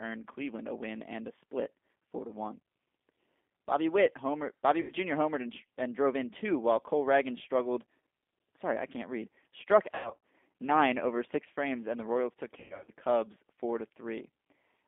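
A speech recording carried over a G.729 codec link throughout, with the band held to roughly 250 Hz to 3.5 kHz and a plainly rough, slightly synthetic texture. Unlike a merely band-limited phone line, the roughness comes from the 8 kbit/s coder rebuilding each 10 ms frame from a vocal-tract filter, a pitch predictor and a handful of pulses. VoIP packet loss concealed by the speech codec breaks in three times: at 4.81 to 4.92 s, a loss of about 80 ms that fits four 20 ms packets; at 9.91 to 10.17 s, just before "nine over six frames", about 220 ms of loss scattered across 320 ms with runs up to 100 ms; and at 12.60 to 12.91 s, about 200 ms scattered across 280 ms, again with runs up to 100 ms. What separates this from plain dropouts is that the gaps are not silent. The decoder keeps extrapolating its last pitch and filter at falling gain, so each hole becomes a buzzy tone or coloured noise that fades, and the speech stays weak and distorted for a short while after packets resume.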